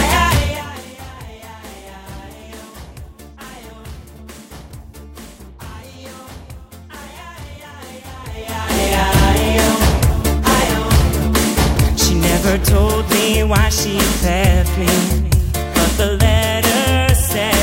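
Nothing here trips the ear at all; the sound just carries on steadily with no technical faults to point out.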